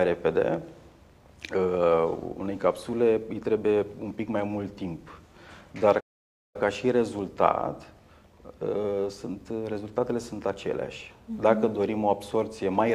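A playback stall silences the audio from 6.00 to 6.56 s, a gap of about 0.54 s, likely because the player ran short of data or its thread was blocked. Unlike a brief dropout or click, the sound halts mid-flow for a clearly audible stretch before it resumes.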